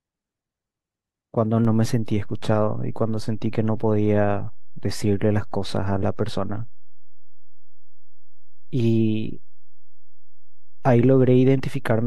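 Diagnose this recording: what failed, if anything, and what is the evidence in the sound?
A DC step at the converter or analogue input: at 1.65 s the waveform's zero line jumps by about -25 dBFS and stays offset to the end. The speech carries on unchanged, but the step is heard as a single low thump at that moment.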